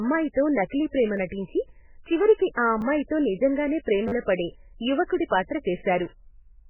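Throughout the speech, the encoder had too few bits, likely from heavy MP3 compression at a rate the sound suggests is near 8 kbps, so nothing is heard above 3 kHz and weak detail switches on and off, giving a muffled, watery, swirling quality.

At 1.17 s and again at 2.81 s, a repeated buffer occurs. New audio arrived late, so a piece that fits a 10 ms buffer plays twice, heard as a brief click. At 4.08 to 4.12 s the same piece plays five times, a short buzzing stutter replacing around 40 ms of speech.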